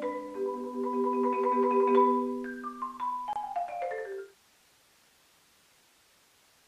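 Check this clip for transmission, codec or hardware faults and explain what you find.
One codec-related fault is present: a gap at a join of encoded pieces, at 3.33 to 3.36 s. The audio was evidently encoded as separate segments and stitched together without trimming the encoder's start-up delay and the padding in each segment's final frame. That leftover silence sits in the joined file, so continuous sound drops out for about 26 ms with smeared edges, then resumes exactly where it stopped. The smooth fade-out running from around 4 s to 4.37 s is an ordinary edit.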